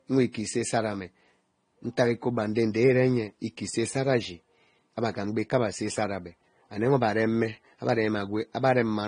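Throughout the speech, the high end is cut off, and two different textures of coding artefact sit on top of each other rather than one. That layering sets it apart from a single low-bitrate encode. The likely cause is transcoding between lossy codecs, consistent with a Vorbis encode re-coded to low-bitrate AAC-LC.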